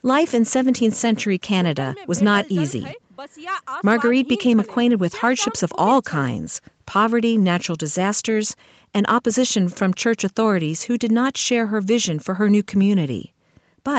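Nothing stood out on listening to this speech recording, which carries the band-limited sound of a call path with no content above about 8 kHz.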